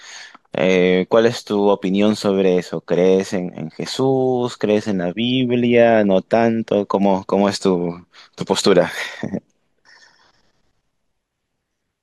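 No technical faults can be heard anywhere in this recording.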